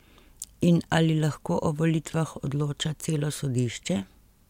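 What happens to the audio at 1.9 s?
Nothing goes wrong at 1.9 s: the speech continues there without any dropout, glitch or other fault.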